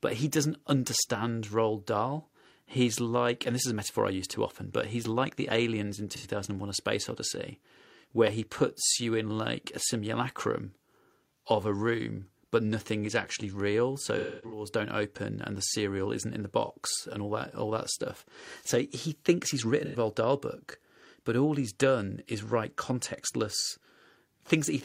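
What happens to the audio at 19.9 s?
Right after "thinks he's", from 19.85 to 19.96 s, there is an AAC frame loss with concealment. About 85 ms of coded audio never reached the decoder, which fits two lost frames. The decoder patched the gap by reusing the last good spectrum with randomised phase, so the sound turns briefly smeared and phasey. On a spectrogram the harmonics blur into a flat, noise-like smear. The waveform's envelope is held steady while its fine structure goes irregular.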